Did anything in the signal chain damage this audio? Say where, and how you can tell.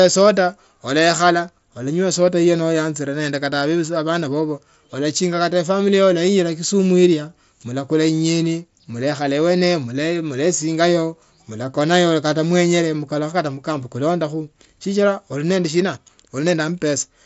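No, none of the stages in the chain damaged this speech. It came through a Bluetooth mSBC headset link, which limits the band to about 8 kHz and adds a light grain on the louder passages, as that wideband headset codec does in normal operation.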